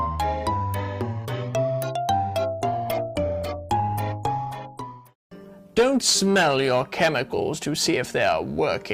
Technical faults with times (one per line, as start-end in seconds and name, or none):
2.61-8.47 call bitrate drop